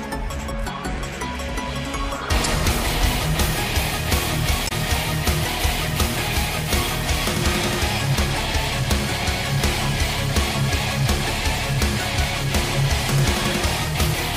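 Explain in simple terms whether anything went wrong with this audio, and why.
Two brief glitches interrupt the sound: a short glitch from 2.44 to 2.46 seconds, and a longer one from 4.64 to 4.72 seconds. Both come from damaged data in a compressed stream. A small stretch of the compressed file was garbled at those points, so the playback software couldn't read it properly. It lost its place, then found the next readable chunk and carried on.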